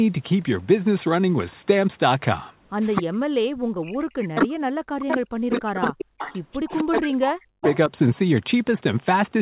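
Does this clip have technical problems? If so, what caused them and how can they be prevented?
Yes. An echo leak is the likely cause of the first problem. The far end appears to play the call over a loudspeaker, and its echo canceller fails to remove all of that playback picked up by its microphone. The result is a copy of the speech delayed by 254 ms. It surfaces as short scraps at 2.95, 4.4 to 4.47 and 5.09 to 5.17 s, as a longer stretch from 5.5 to 7.02 s, and again at 7.61 to 7.77 s. Mostly it sits about 10 dB under the speech, but near 4.4 s it is as loud as the speech itself. Prevention: use a headset on the far side, or lower its loudspeaker volume so the canceller can keep up.

The second problem is speech suppressed in double talk, and again the cause is likely the echo canceller. While both sides talk at once, it cannot tell its own talker apart from the returning echo, so it turns everything down. 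From 2.99 to 6.22 s, and again from 6.68 to 7.91 s, the speech dips and breaks into pieces, at times falling by about 40 dB. That affects roughly three seconds in the first span and under a second in the second, all within this 4 kHz-wide call audio. Prevention: avoid talking over each other, or use a headset so the canceller has less echo to fight.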